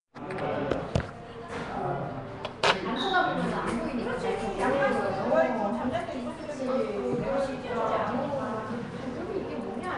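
Throughout, the everyday sound has a rough, hissy, smeared halo and nothing above 10.6 kHz. This is likely Nellymoser compression, at a rate fitting about 44 kbps.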